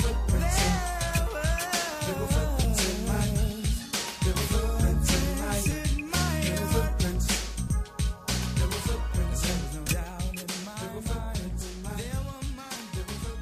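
Compressed frames are skipped four times, at 2.63–2.66 s, 7.67 s, 9.87–9.92 s and 11.61–11.65 s. The sound lurches forward by roughly 100, 150, 100 and 70 ms, jumps that fit whole 20 ms frames going missing or being rejected by the decoder. Unlike a dropout, there is no silent gap; the audio simply jumps ahead at each join.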